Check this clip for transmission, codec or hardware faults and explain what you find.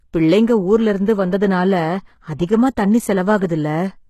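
Two codec faults stand out, one lasting the whole clip and one brief.

Throughout, the speech has its treble rebuilt rather than coded. The likely cause is HE-AAC compression, which fills the upper band by copying lower bands upward. Harmonics therefore misalign, s sounds turn gritty and metallic, and nothing reaches above 12.3 kHz. The damage is plainly audible and fits a bitrate around 16 kbps.

From 3.39 to 3.42 s there is pre-echo. The transform codec spread quantisation noise sized for a sharp attack across its whole block, including the quiet stretch before it. A short hiss leads the onset by about 30 ms, and the attack sounds smeared.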